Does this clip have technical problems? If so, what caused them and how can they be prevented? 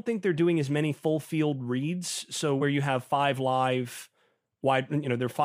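Yes. Around 2.60 to 2.65 s, just before "you have five live", the speech jumps forward slightly: compressed frames skipped, with roughly 20 ms of audio left out. Prevent this by checking file integrity and using reliable transfer.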